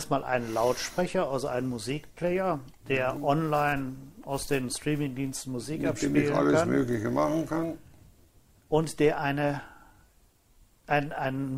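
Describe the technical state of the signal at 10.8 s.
At 10.8 s the audio moves with a faintly uneven tempo, with small hiccups where short pieces are repeated. This comes from clock drift between sender and receiver: the sender's clock runs roughly 3% slow, so the receiver's buffer keeps running short of material.

Those hiccups are repeated timing corrections, spanning 0.14 to 11.32 s, so 10.8 s falls inside them. To keep pace, the receiver repeats short pieces at uneven intervals, stretching playback to 97% speed and adding roughly 300 ms in total.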